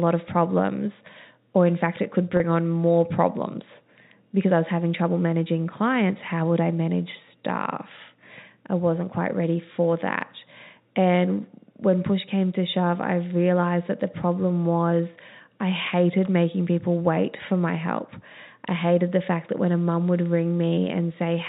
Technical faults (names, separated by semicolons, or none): packet loss with pitch repetition